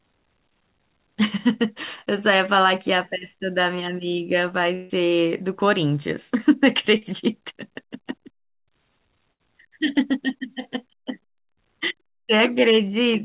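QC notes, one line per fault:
4.74–4.92 s, long network dropout: about 0.16 s of sound never arrives. The receiver fills the whole gap by stretching the last sound into a fading buzz or hiss, and the audio resumes further on with that stretch missing. The likely cause is a long network dropout, though here the fill never decays to silence or a steady noise floor. That makes it sit close to a burst of packet loss, and it is told apart mainly by its greater length.
6.98–7.04 s, short concealed packet loss: a 40 ms hole is filled by continuing the preceding sound, voiced material from its pitch and unvoiced material as shaped noise, then blended back into the real signal. It is heard as a brief smear or wobble, and a short consonant can disappear. Unlike the longer losses, it passes as a momentary blur rather than a held tone.
9.32–9.41 s, burst of packet loss: about 80 ms of consecutive audio is lost. 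The concealment holds the last sound and turns it down as the gap continues, so a voiced sound becomes a sustained buzz and an unvoiced one a fading hiss. The audio then jumps ahead with the middle missing. It is longer than the 40 ms event but shorter than the 4.74 s event. The band-limited sound, with nothing above 4 kHz, fits a G.711 A-law call path and doesn't change across any of these gaps.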